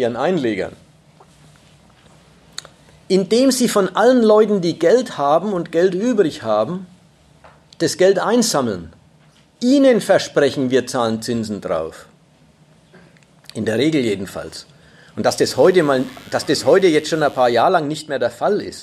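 Mains buzz appears from 15.28 s to 17.63 s, a steady, raspy buzz sitting well below the main sound, roughly 30 dB down. It is built on a 50 Hz mains supply: something such as a dimmer, a rectifier or a poorly shielded cable has let sharp switching spikes into the signal path twice per cycle, and those spikes carry a dense comb of 50 Hz harmonics stretching up into the kilohertz range, which gives the buzz its edge.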